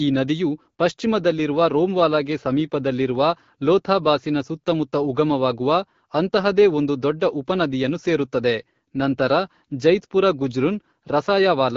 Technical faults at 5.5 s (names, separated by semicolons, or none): none